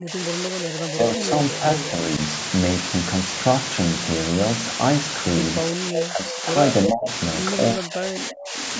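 Low bit depth with dither runs through all of the speech: only about 3 bits are in use, and dither added before rounding turns the error into a steady, even hiss roughly as loud as the voice itself. The sound stops at 8 kHz, as normal for call microphone processing.

Speech suppressed in double talk comes first from 0.0 to 2.0 s, with the voice dipping by around 10 dB for about a second in total, likely because an echo canceller, unable to tell talker from loudspeaker echo, turned both down.

Echo leak appears at 1.19 to 1.24 s and 1.77 to 1.84 s: brief scraps of a copy delayed by about 341 ms, some 15 dB below the speech. This is likely residue the far end's canceller failed to remove.

Suppression returns at 5.79 to 6.47 s (around 10 dB), and echo leaks again at 5.93 to 6.03 s, now only about 5 dB down with a delay of about 342 ms.

From 6.85 to 7.09 s the voice is cut by roughly 30 dB, with echo at 7.03 to 7.1 s.

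From 7.74 to 8.56 s it drops by roughly 25 dB.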